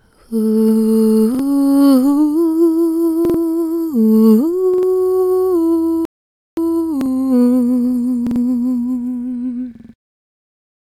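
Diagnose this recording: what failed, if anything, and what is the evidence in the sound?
Repeated buffers at the driver/buffer stage: short stutters at 1.35, 3.25, 4.74, 7.01, 8.27 and 9.75 s, each a 46 ms chunk replayed once to four times, which fits a 2048-sample buffer.

A playback stall drops the sound to silence from 6.05 to 6.57 s, about half a second, likely because the player ran out of data before resuming.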